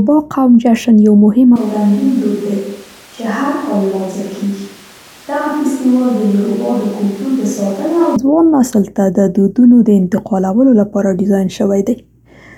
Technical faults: switch to a distant microphone

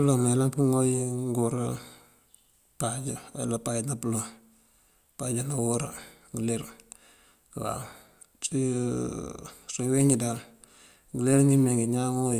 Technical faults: none

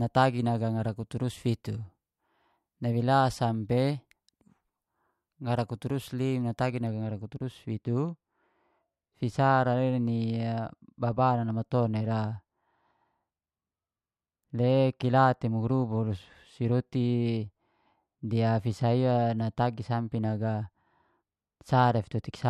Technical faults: de-emphasis applied wrongly

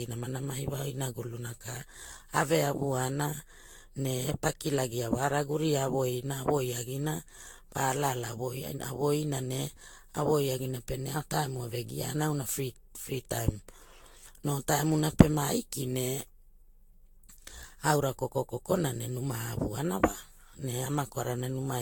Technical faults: generation loss

